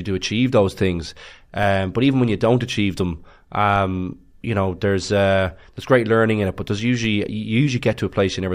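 At 1.63 s, after "do achieve those things", at 3.76 s, after "you don't achieve them", and at 7.04 s, after "in it but there's", a DC step of about −22 to −23 dBFS shifts the waveform's zero line, giving a low thump. A 20 Hz high-pass then decays the offset. Spectrograms show brief broadband low-frequency bursts.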